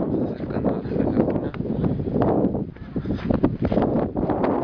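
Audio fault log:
Nothing stood out on listening to this audio.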